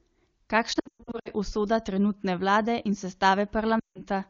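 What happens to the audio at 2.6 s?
At 2.6 s the speech continues intact, carried through the AMR wideband (HD Voice) codec at its highest rate, which fits a 23.85 kbit/s stream and keeps the sound clear with no fault at that point.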